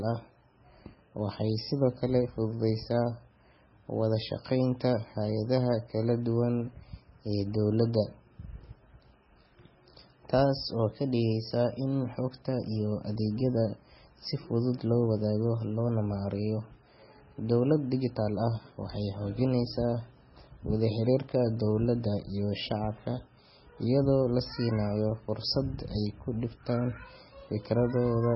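Throughout the speech the sound is dull and watery, with nothing above 5.6 kHz and a swirling, chirpy texture on s sounds. This is likely heavy MP3 compression, at a very low bitrate near 16 kbps, cutting treble and dropping weak frequency lines frame to frame.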